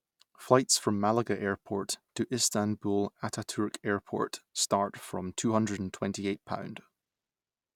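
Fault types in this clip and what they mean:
No fault types are present in this clip.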